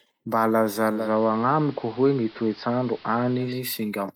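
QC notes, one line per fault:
0.87–3.65 s, digital radio blending to analogue: the receiver lost the digital stream and cross-faded over 287 ms to the station's AM broadcast, then faded back. The AM path carries less treble, so the speech turns dull and boxy for that stretch. A steady hiss rises underneath, roughly 25 dB below the speech, and the level shifts by about 1 dB at each blend.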